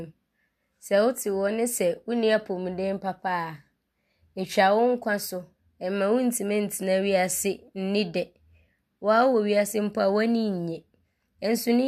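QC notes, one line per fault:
Speech clip checked end to end; no faults found.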